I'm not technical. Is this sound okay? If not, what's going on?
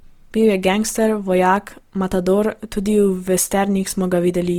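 No. The speech sounds grainy and rough all the way through. This is likely Opus compression squeezing the audio too hard.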